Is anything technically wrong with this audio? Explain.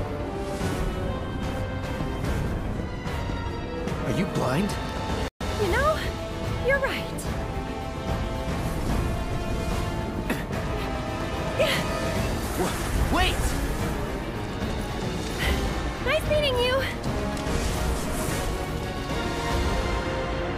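Yes, there is a playback stall. At 5.28 s the player likely ran short of data or was blocked, so the sound falls silent for 125 ms before resuming at 5.41 s.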